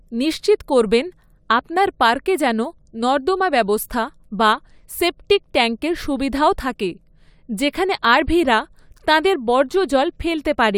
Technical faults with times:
none

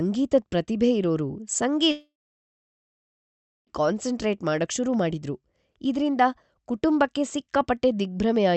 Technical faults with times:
1.91-3.70 long network dropout

